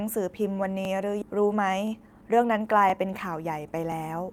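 A speech recording with three kinds of fault. Overlapping chunks cause small stutters at 0.85, 1.87, 2.90 and 3.92 s. At each join, about 23 ms of sound plays twice because each 1.0 s chunk begins before the previous one ends. On a waveform, a short stretch repeats at each join, and a spectrogram shows a brief vertical seam every second. A skip ahead at about 1.22 s jumps straight forward with no gap, losing something like 0.7 s of speech. The waveform joins two unrelated sections, and the spectrogram's harmonic lines break off abruptly. From 1.32 to 3.51 s a jitter buffer speed-up makes the talker sound hurried at an unchanged pitch. Playback runs at 109% because short pitch-period pieces, about a fifth of a second in total, were cut to reduce buffered delay. Syllables look compressed in time while the harmonic spacing stays the same.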